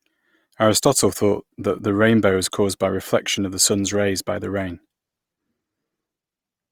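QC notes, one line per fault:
throughout: Opus compression. The speech sounds grainy and rough, with a noisy sheen, likely from music-mode Opus filling starved bands with noise, which fits a low bitrate near 24 kbps.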